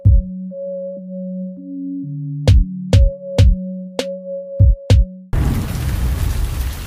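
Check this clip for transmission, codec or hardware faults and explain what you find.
Nothing stood out on listening to this clip.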